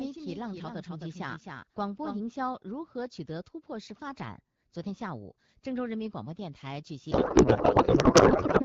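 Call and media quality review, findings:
Doubled audio track, 0 to 2.22 s. Second full-band copy trails by about a third of a second, roughly 5 dB down. Dry, no room colour. Already present at start, stops abruptly. Likely an echo of capture through a slower second path.

Codec payload misread, 7.11 to 8.63 s. Speech replaced by garbled noise and warble that barely tracks it. Receiver parses octet-aligned AMR frames as bandwidth-efficient, so the fields land in the wrong bits. Suspect payload format negotiation. AMR-WB at 12.65 kbit/s is clear outside this span.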